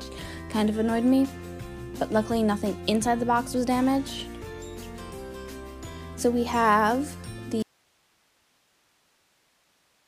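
At 7.63 s the audio dropout to a faint residue begins, likely a lost feed, leaving only hiss about 40 dB down to the end; the cut is abrupt, not a fade.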